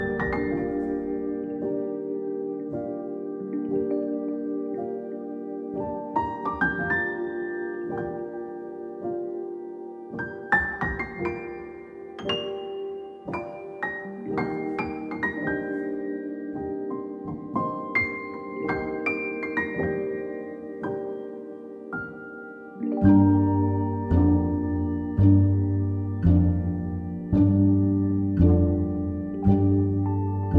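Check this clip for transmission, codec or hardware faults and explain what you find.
No transmission, codec or hardware fault turns up anywhere in the audio; the signal holds together continuously with nothing in it that points to a problem in the chain.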